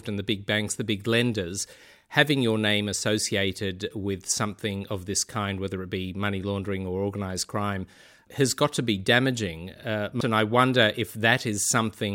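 At 10.21 s there is a CD skip. A knock or disc flaw made the laser jump to another turn of the spiral. The player mutes for a few milliseconds. A small tick is heard, and the speech resumes from a different point.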